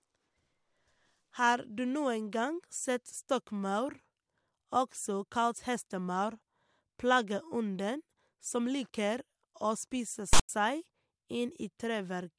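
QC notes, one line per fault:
10.33–10.49 s, file tags played as audio: a block of text tags got read as samples, so you get a harsh, lopsided rasp with hard edges, then a dead-silent gap where the zero padding follows. About 0.16 s total, sudden in and out.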